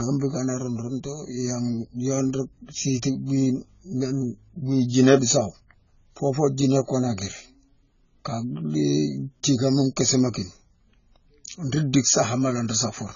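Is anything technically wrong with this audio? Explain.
Yes. Throughout the clip, the speech has likely been through AAC compression, with AAC-LC squeezed hard enough that the damage fits a very low bitrate of around 16 kbps. At that rate the encoder cannot spend bits across the whole band, so it discards everything above 7 kHz and coarsely quantises what remains. The speech comes out dull and smeared, with sibilants losing their crispness and taking on a warbling, fizzy texture.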